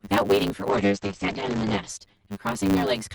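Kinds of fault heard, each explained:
Channel delay (comb filtering): One side of the speech arrives roughly 10 ms late and gets summed to mono, so shared content cancels at evenly spaced frequencies starting somewhere around 40 Hz. The whole clip ends up hollow and phasey, with notches that never move.
Block size mismatch (truncated): A stage is writing bigger blocks than the next one reads, and the leftover tail of each block gets dropped. You hear a 100 Hz buzz at the block rate, and the speech runs 1.16 times fast at about normal pitch, which fits a 512-sample write.
Call bitrate drop: From 0.71 s to 1.95 s the encoder gets starved, and it sits at its lowest for about 1.17 s. The top end collapses from 20 kHz down to 8 kHz and things turn rough and muffled, which points to a fall from about 48 kbps to about 9 kbps.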